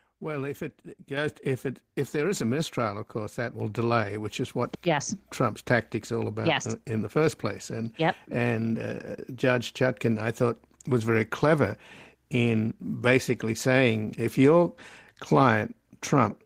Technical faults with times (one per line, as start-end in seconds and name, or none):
1.17 microphone volume stepped up
3.60 microphone volume stepped up